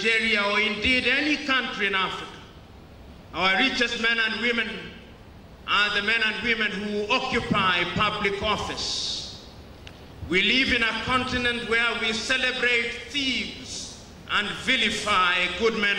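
No technical faults are audible.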